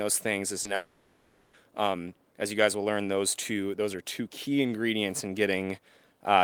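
Speech, with a short concealed packet loss from 0.63 to 0.67 s: about 20 ms of audio was lost and filled by extrapolating the preceding sound, heard as a brief smear or wobble. A spectrogram shows a thin vertical seam where the harmonics blur before rejoining. From 0.75 to 1.55 s the sound turns into a synthetic buzz or hiss that fades, with no true silence before normal audio resumes. This is likely a long network dropout, with about 780 ms concealed by repeating the last sound. On a waveform it looks like a smooth, repetitive, shrinking envelope, and a spectrogram shows frozen, smeared bands in place of changing speech structure.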